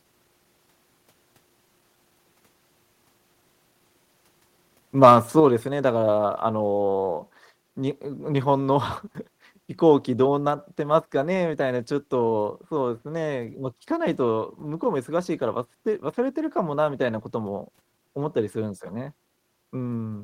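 At 5.4 s the speech and the background beneath it fall together by about 5 dB in a single instant, and the lower level holds from then on. This is a microphone volume stepped down, most likely the call software cutting the device's input volume in one move because it judged the microphone too hot. Because the reduction happens at the input rather than in later processing, everything the microphone picks up drops at once, with no fade or gradual adjustment.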